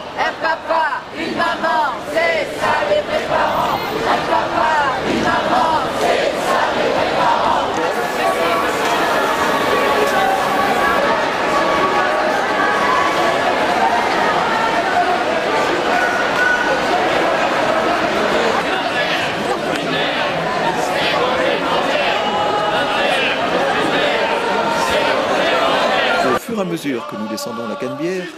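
From 7.94 s to 10.99 s the signal is reduced to a low bit depth with dither: only about 6 bits of resolution are kept, and random dither is added before rounding so the rounding error spreads out as broadband noise instead of clinging to the waveform. The result is a constant, even white hiss for those three seconds, sitting around 20 dB below the signal, with no gritty or harmonic distortion.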